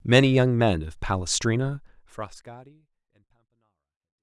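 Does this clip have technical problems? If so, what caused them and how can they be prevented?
No, nothing here needs fixing; the speech just eases out with a gentle fade that begins around a second and a half in and tapers off smoothly toward the end, exactly as an editor would shape it.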